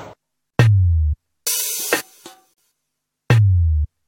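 Two short dropouts cut into otherwise continuous sound, at 0.50–0.54 s (32 ms) and 2.54–2.58 s (43 ms), two seconds apart. Each is a gap at a join of encoded pieces: separately encoded segments were concatenated with their encoder start delay and final-frame padding left in, so the sound drops out with smeared edges and resumes where it left off.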